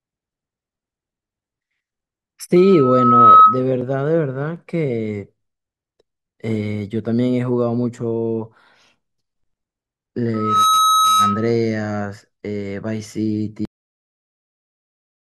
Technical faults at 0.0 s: none

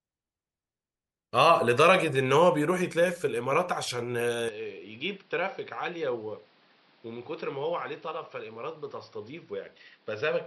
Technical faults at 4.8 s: input switched to a poorer device

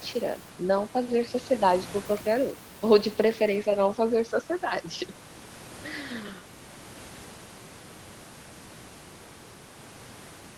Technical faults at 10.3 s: none

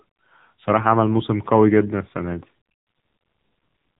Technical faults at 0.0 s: AMR narrowband mobile codec

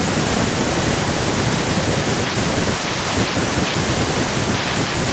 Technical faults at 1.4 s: echo leak

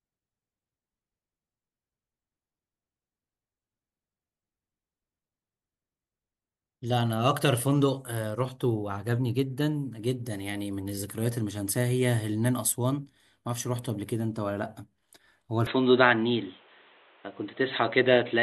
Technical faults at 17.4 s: input switched to a poorer device

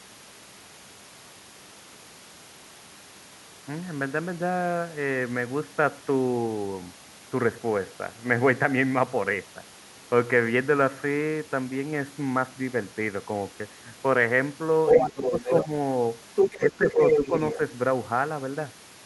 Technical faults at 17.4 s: other side's voice leaking through

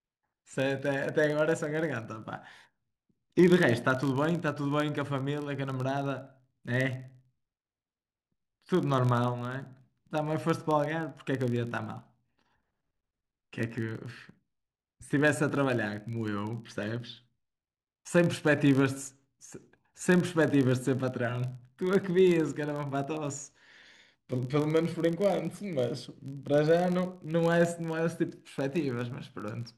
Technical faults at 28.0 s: filter restarted on every block

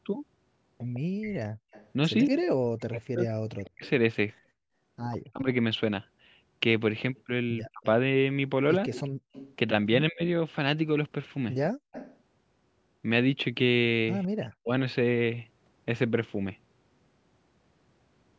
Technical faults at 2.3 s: echo leak; speech suppressed in double talk

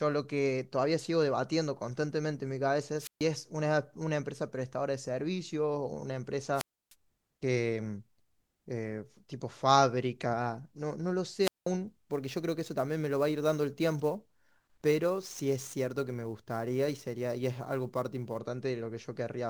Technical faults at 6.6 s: wireless microphone squelch dropout

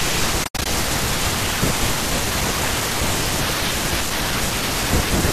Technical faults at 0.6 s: AAC frame loss with muting

